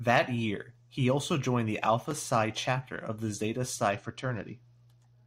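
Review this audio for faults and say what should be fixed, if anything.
A Bluetooth SBC bit pool drop sets in at 3.92 s and lasts to the end at 5.26 s. The speech turns dull and gritty: starved of bits, the top sub-bands vanish and the remainder is coarsely quantised. That fits a bit pool falling from 28 to about 9, near 78 kbps. Unlike a simple low-pass or EQ change, the treble loss arrives together with rising grainy noise. Preventing it means reducing radio congestion or interference on the Bluetooth link, or moving to a wired connection, so the encoder keeps its full bit pool.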